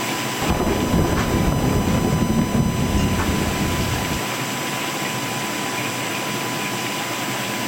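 There's a steady USB whine under the audio from start to finish, a fixed tone at 1 kHz sitting only about 10 dB below the signal. That pitch matches the bus's 1 ms frame rate, so current draw from the USB port is leaking into the power or ground.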